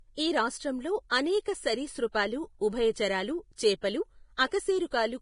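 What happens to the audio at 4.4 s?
At 4.37 s there is pre-echo. A sharp attack lands late in a transform block, so quantisation noise meant for the loud onset also fills the quiet moment before it, spreading about 17 ms early. It sounds like a brief hiss ahead of a softened attack. On a spectrogram it shows as broadband smear just before the onset edge, and on a waveform as fuzz ahead of the transient.

The same moment carries heavy Vorbis compression: treble is grainy and hissy, attacks are blurred, and nothing remains above 10.6 kHz. This is likely low-quality Vorbis coding, consistent with a bitrate near 31 kbps. A spectrogram shows a hard ceiling at 10.6 kHz with speckled, noisy upper bands.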